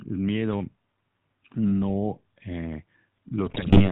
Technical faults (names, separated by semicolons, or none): GSM full-rate codec; GSM bit errors